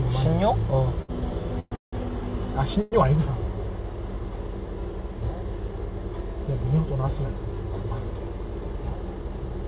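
Between 1.02 and 1.95 s, packets kept arriving late, so the jitter buffer ran dry four times. The result is repeated stalls (stutter): the receiver stretched the last sound to cover about 358 ms, with the longest hold lasting 171 ms. Nothing is lost, but the sound drags and judders through that stretch.

At 2.81 to 2.94 s comes a brief call audio freeze, likely from packets being held up in transit. The last sound is continued as a fading buzz or hiss for about 104 ms rather than dropping to silence, then the audio resumes where it stopped, pushed later by that amount. Across the clip, the call path's band limit leaves nothing above 4 kHz, which fits a G.711 narrowband link.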